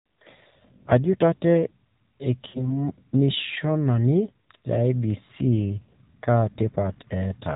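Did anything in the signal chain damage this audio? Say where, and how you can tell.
Yes. At the codec stage, AMR narrowband mobile coding runs throughout. Nothing above 4 kHz survives, and the speech has a plainly buzzy, synthetic edge, consistent with the 7.4 kbps mode. A plain low-pass filter would dull the sound without that pitch-pulse roughness.

In the radio and network path, lost AMR speech frames occur at 2.48 to 2.73 s and again at 4.43 s. The decoder stretches the last good pitch and vocal tract settings while fading gain, about 60 ms of concealment, then 40 ms. This smeared fade-out, rather than a hard gap or click, marks codec concealment instead of a dropout.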